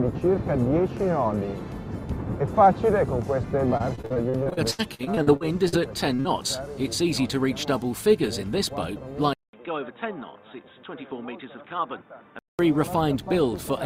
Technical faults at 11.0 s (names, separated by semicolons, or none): input switched to a poorer device